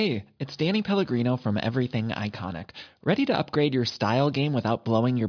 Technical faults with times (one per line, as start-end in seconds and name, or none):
none